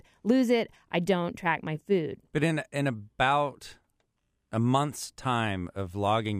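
A speech recording with no technical faults to report.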